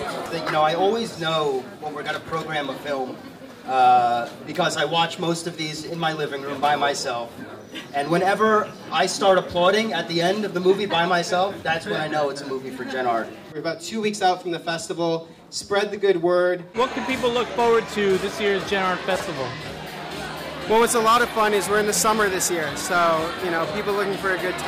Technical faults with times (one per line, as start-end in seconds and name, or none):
19.16-19.24 chunks out of order